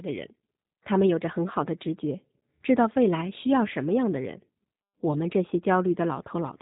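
G.729 codec damage runs throughout: speech rebuilt from a filter, pitch predictor and sparse pulses sounds rough and synthetic, stops at 3.8 kHz, and fits an 8 kbit/s G.729A stream.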